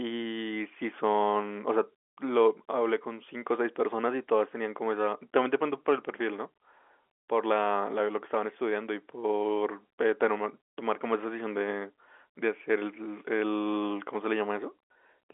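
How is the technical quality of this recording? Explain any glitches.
There are no glitches to explain in the technical quality of this recording.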